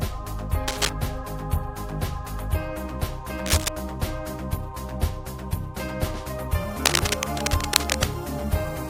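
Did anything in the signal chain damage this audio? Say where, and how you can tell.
Yes, cable scratch noise in the analogue wiring: ragged crackly bursts at 0.67–0.89, 3.46–3.68 and 6.84–8.04 s, roughly as loud as the sound, likely a worn connector being jostled.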